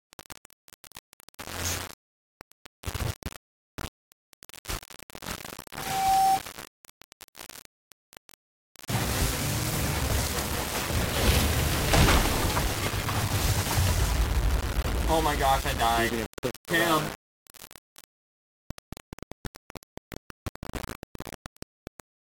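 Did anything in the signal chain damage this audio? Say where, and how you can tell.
Yes, in two places. The whole clip, all 22 seconds, has a coarse, grainy distortion that rides on the sound itself. It gets gritty as things go quiet, and the error sits only about 10 dB under the signal. That points to the sample-format conversion stage, most likely low bit depth without dither, something like a 4-bit word with plain rounding. Because no dither was added, the rounding error tracks the waveform instead of becoming a steady hiss.

The second is a loudspeaker feedback squeal on the capture side, from 5.59 to 6.47 s. A single 770 Hz tone swells up over roughly half a second and ends up around 10 dB louder than the program. That's a microphone hearing the loudspeaker it feeds: at 770 Hz the loop gain went past one, so the tone kept growing on itself until it stopped just under a second in.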